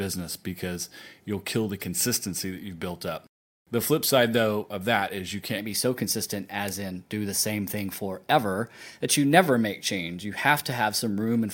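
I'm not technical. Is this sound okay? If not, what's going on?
No. From 5.58 s to the end, the audio has a wrong sample rate fault. It's played back about 1.09 times faster than it was recorded, which fits 44.1 kHz audio being played at 48 kHz. The speech sounds hurried and about one and a half semitones higher in pitch.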